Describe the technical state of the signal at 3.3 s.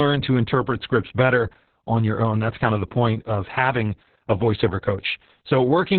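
At 3.3 s, as throughout the clip, Opus voice compression in narrowband SILK mode, consistent with roughly 6 kbps, muffles the speech hoarsely; the spectrogram shows nothing above about 4.3 kHz.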